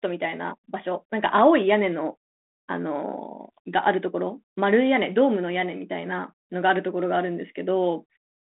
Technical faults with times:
none

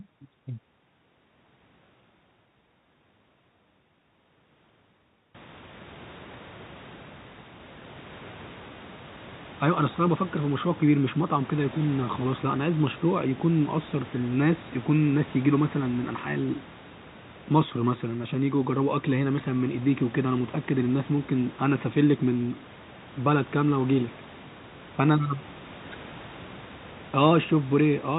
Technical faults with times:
none

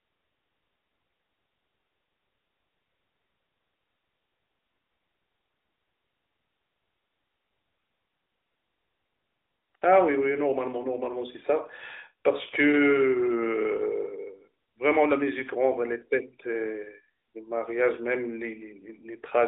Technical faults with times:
none

